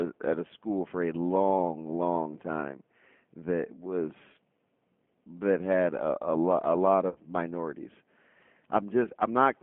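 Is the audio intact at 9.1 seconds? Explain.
No. Around 9.04 to 9.09 s, just before that point, a single packet's worth of audio, about 20 ms, failed to arrive, and the speech decoder covered the gap through VoIP packet loss concealment. It repeated its last pitch period and vocal tract filter while fading the gain, so the speech there turns into a brief, slightly smeared buzzy tone or coloured noise that dips in level. Because each frame is decoded from the state of the one before, the speech just after 9.09 s, including at 9.1 s, can still sound weak or slightly off as it recovers.

Beneath that, the whole passage carries G.729 codec damage. The low-rate speech coder rebuilds the voice from a filter model, a pitch predictor and a few pulses per frame, and its rough, slightly synthetic quality fits an 8 kbit/s G.729A stream. The sound is confined to a telephone band of 150 Hz to 3.4 kHz, so it is thin and dull with no high frequencies, and the coding artefacts are plainly audible.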